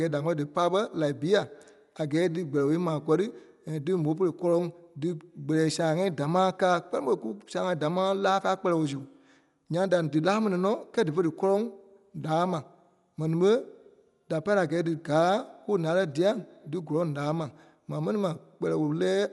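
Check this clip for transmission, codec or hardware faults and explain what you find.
One codec fault runs through the whole speech clip. Dolby Digital compression, throughout, is the likely cause: nothing sounds above 11.5 kHz, and bit-starved lines are filled with dither noise, which fits about 64 kbps. The result is dull, rough speech.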